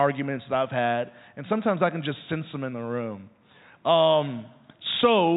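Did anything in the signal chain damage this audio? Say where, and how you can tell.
No, nothing in this speech stood out on listening as damage from any stage of the signal chain.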